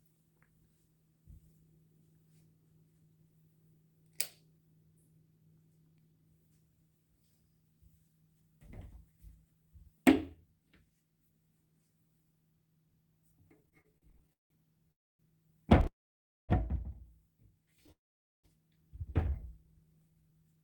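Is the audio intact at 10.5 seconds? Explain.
Yes, the audio is intact at 10.5 seconds, with no dropout, click, distortion or other fault in the sound at that moment.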